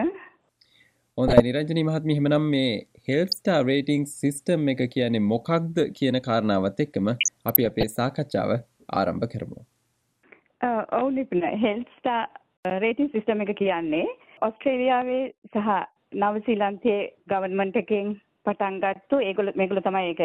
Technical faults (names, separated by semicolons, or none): DAB burbling